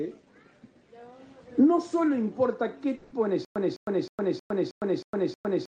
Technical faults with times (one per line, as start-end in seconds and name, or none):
2.95-3.13 long network dropout
3.45-5.70 stutter with silent gaps